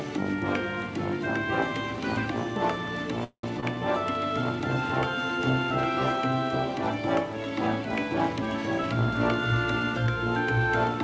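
The audio comes through a call path whose band stops at 8 kHz, consistent with G.722 at 64 kbps. It has a call audio freeze from 3.24 to 3.44 s. The last sound is stretched into a fading buzz or hiss that ends in about 80 ms of silence, then resumes where it left off with nothing lost. The likely cause is packets arriving late and draining the jitter buffer, adding roughly 0.19 s of delay. Shortly after, at 3.60 to 3.63 s, there is short concealed packet loss. About 40 ms of audio never arrived and the decoder bridged it with 20 ms of extrapolated sound, heard as a brief smear before the real signal returns. The shorter fill also takes back about 20 ms of the delay.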